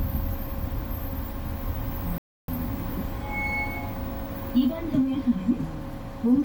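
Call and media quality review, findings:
Bluetooth LC3 compression, whole clip: plainly audible grainy, breathy texture on high-frequency detail in these everyday sounds. The top is noise-filled rather than real detail. This likely comes from a transform codec with 10 ms frames, consistent with roughly 48 kbps. It differs from a low-pass or band-limit fault because the top end is present but synthetic rather than missing.

Playback stall, 2.18–2.48 s: output drops to silence for about 0.3 s mid-flow, then resumes. Probable component is the player or its output buffer, through an underrun or a blocked audio thread. It differs from packet loss concealment because the gap is clean, with no smeared or repeated fill, and it is a single event rather than scattered gaps.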